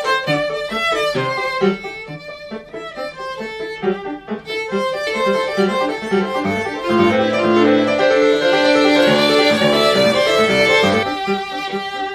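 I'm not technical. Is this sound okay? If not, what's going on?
No. From 5.07 to 11.03 s there's a doubled audio track: the same sound plays twice, the copy about half a second behind and roughly as loud. Unlike an echo, it never fades and switches on and off abruptly, likely from a second, delayed recording path.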